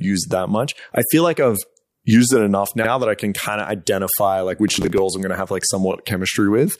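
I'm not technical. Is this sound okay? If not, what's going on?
No. From about 4.68 to 4.98 s, right after "kind of identify like" and before "I'm going to have", there's a gritty burst of processor overload crackle. The computer fell behind and missed around ten tiny audio deadlines, each patched with a scrap of old audio.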